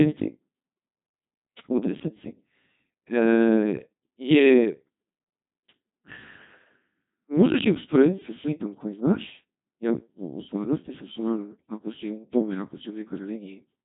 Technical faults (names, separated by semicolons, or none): Codec 2 vocoder